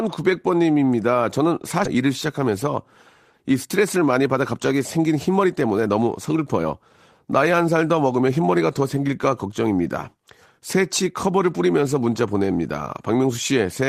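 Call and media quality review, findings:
Skip ahead at 1.85 s: speech jumps forward with no gap, about a second of audio gone, ends butted together. Probably the jitter buffer overflowing and dumping queued audio, or loss upstream. Playout delay drops by roughly a second.

Jitter buffer speed-up, 3.65 to 6.90 s: speech runs about 8% fast at unchanged pitch, a bit hurried. Buffer was over target, so the receiver kept trimming pitch-period-sized slices, around a third of a second in total.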